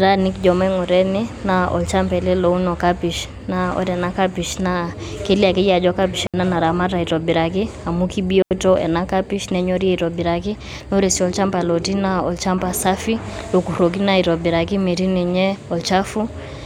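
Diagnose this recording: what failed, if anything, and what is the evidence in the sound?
Digital wireless dropout on the radio link: clean, near-silent holes at 6.27–6.34 s and 8.42–8.51 s with no noise bursts. The receiver is muting when data is lost.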